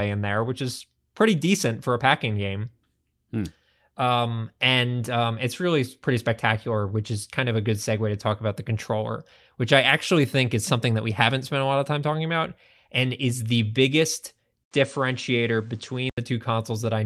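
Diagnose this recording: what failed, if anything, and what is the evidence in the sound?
Right after "and is the biggest", at 14.63 s, there's an 80 ms dropout, then until 16.18 s the top end stops at 9.3 kHz and a new noise floor appears well below the speech at the same level. That's likely an input switched to a poorer device at the driver stage.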